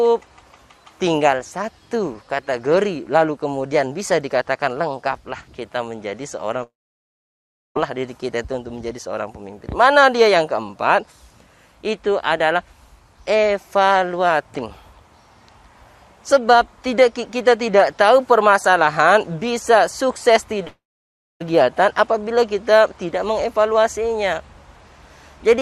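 At 6.63 s the sound breaks off. The last moment smears into a brief fading buzz, then about 1.04 s of silence, and the audio resumes at 7.77 s with roughly 1.1 s missing. At 20.67 s the same happens again: a short decaying tail, about 0.61 s of silence, and a return at 21.42 s. This is likely a long network dropout. Unlike a short concealed packet loss, the filler dies out completely, and unlike a pause, the lost material never returns.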